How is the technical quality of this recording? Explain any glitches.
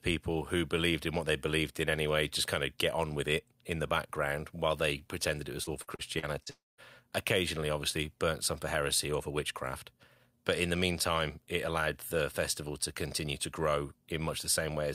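Two connected network faults disrupt the speech between 5.63 s and 6.81 s.

From 5.63 s to 6.49 s, just after "while they pretended it", there is repeated packet loss (robotic sound). Five short holes, the longest 42 ms, cut into the stream. The receiver covers each one by extending the last audio it had, so about a fifth of that stretch is synthetic fill. The result is choppy speech with small pieces missing.

At 6.50 s, the speech breaks off entirely for about 0.3 s. A short smeared continuation of the last sound is followed by roughly 0.2 s of silence before the speech resumes at 6.81 s. The passage in between never plays. This is likely a long network dropout: nothing arrived for that span, and the concealment could only extend the previous sound briefly before fading out.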